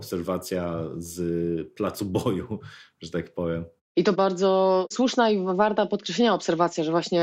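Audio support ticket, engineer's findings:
No audible faults found on listening to the speech recording; nothing to attribute to capture, processing or playback.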